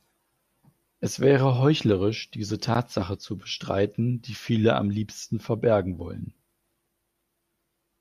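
No technical faults are audible.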